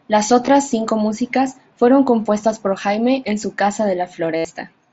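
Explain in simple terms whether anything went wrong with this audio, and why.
Two small dropouts from concealed Bluetooth headset packet loss. Audio packets between the headset and phone went missing, and the phone filled the gaps by repeating the last bit of sound it had. At 0.46 s, just before "cinco músicas fueron compuestas", the gap is only about 15 ms. From 4.37 to 4.45 s, after "en su casa", 75 ms are patched, enough for a brief buzzy hold and a slight warble, which fits around ten lost packets.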